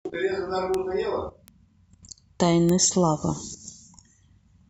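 At 0.74 s a sharp tick cuts through the speech, peaking at about -11 dBFS. It sounds like a very short run of corrupted samples. This is a bit error spike. A flipped bit makes the sample value jump by a power of two, then snap back. A second tick follows at 1.48 s, quieter at about -18 dBFS. The loudest lands at 2.69 s, near -5 dBFS. Each is broadband and unrelated to the speech.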